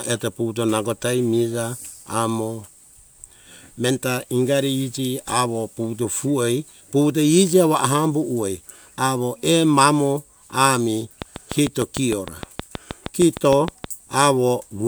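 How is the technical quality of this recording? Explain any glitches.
The recording has one clear glitch, a train of clicks from 11.22 to 13.85 s, just after "mamo ah mi". Something in the chain, likely interference from nearby equipment or a faulty connection or power supply, injects a pulse about 6.5 times per second at steady spacing. That produces roughly twenty near-identical ticks, peaking about 15 dB above the speech.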